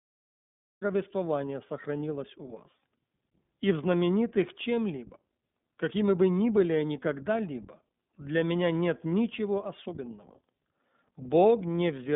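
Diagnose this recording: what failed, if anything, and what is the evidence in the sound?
The codec stage is iLBC. The speech is confined to roughly 150 Hz to 3.6 kHz, with nothing above 3.7 kHz, and its rough, synthetic coding damage is plainly audible throughout.

The recording or stream started late, a cut-off start. Silence runs from 0.0 to 0.82 s, and then the speech enters abruptly mid-sound, with no natural attack.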